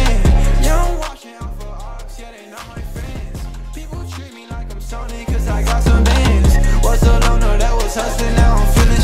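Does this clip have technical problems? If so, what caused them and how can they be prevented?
Yes. Zipper noise runs from 4.70 to 5.98 s, where a level move of roughly 15 dB happens in unsmoothed 2 dB steps, about seven per second, each step clicking. Interpolating the gain sample by sample prevents it.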